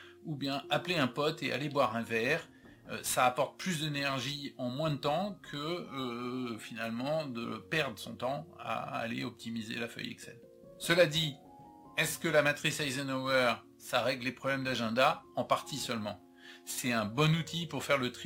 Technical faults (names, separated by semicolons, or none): crude rate conversion